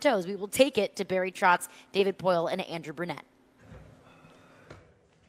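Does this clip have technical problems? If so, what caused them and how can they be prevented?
No, there are no technical problems to fix here.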